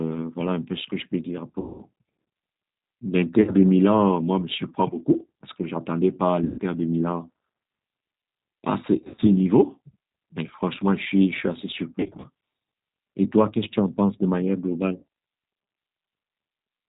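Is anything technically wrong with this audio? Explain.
Yes. The speech runs through the G.729 codec throughout, at 8 kbit/s. It rebuilds each 10 ms frame from a vocal tract filter, a pitch predictor and a few pulses, so nothing above 4 kHz survives and the sound is plainly rough and synthetic.

VoIP packet loss concealed by the speech codec occurs at 1.60–1.83, 3.42–3.52, 6.44–6.60, 8.98–9.23, 12.00–12.28 and 14.96–15.04 s. The decoder extrapolates its last pitch and filter at falling gain, so the gaps become fading buzzy tones or coloured noise. The losses at 8.98 and 12.00 s are scattered rather than continuous, and speech stays weak briefly after each.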